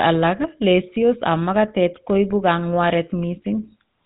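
From start to finish, the speech has GSM full-rate codec damage. Nothing passes above 3.9 kHz, and the pulse-driven vocal-tract model leaves a plainly buzzy, gravelly roughness.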